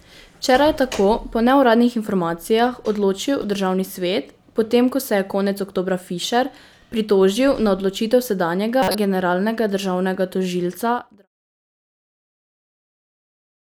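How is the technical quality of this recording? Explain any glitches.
Two brief decoding glitches interrupt the speech. The ending is a smooth fade out that finishes at 11.28 s, not a fault.

Corrupt frame decoded: from 3.41 to 3.44 s, just after "po neuradni informacijah odločil," and from 8.82 to 8.95 s, just before "generalnega državnega," damaged compressed frames were decoded anyway. The misread data places energy at the wrong frequencies. The first burst spans a couple of frames and is moderately loud. The second spans several frames and is far louder, roughly 20 dB above the first. Unlike a click or dropout, each one is a frame-length burst of wrong sound, not a single spike.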